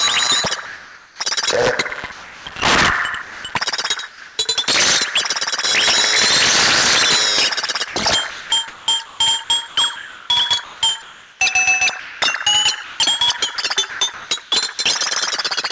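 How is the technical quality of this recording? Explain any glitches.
The recording has repeated gaps where the transmitting side stopped sending and synthetic noise filled in, giving an uneven, patchy quality. Nothing is heard above 8 kHz, which fits a wideband call codec such as G.722.

Comfort noise in place of the background, 0.66–1.20 s, 2.12–2.46 s and 4.08–4.38 s. In these pauses the background, sitting roughly 21 to 26 dB below the loud parts, turns into a smooth, featureless hiss. The likely cause is discontinuous transmission: the sender went quiet and the receiver generated noise shaped like the room. The first patch matches the real level, while the second and third drop by about 3 dB and about 2 dB.

Sound dropped by the voice detector, 3.22–3.44 s, 12.00–12.22 s and 15.42–15.44 s. Here real sound vanishes under steady noise. About 170 ms is lost at 3.22 s, about 80 ms at 12.00 s and 20 ms at 15.42 s. 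The likely cause is the sender's detector mistaking a quiet sound for background and halting transmission until it retriggered.

Sound chopped by the voice detector, 7.66–11.40 s and 12.84–14.78 s. Across these stretches the detector likely toggled on and off repeatedly. About 1.66 s of the first stretch and 0.62 s of the second were swapped for comfort noise. The result is choppy, broken-up sound.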